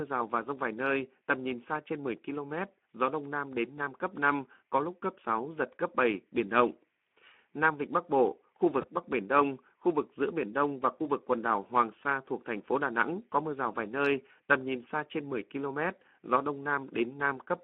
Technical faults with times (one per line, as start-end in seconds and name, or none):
0.00-17.63 Speex codec
8.81-8.88 VoIP packet loss concealed by the speech codec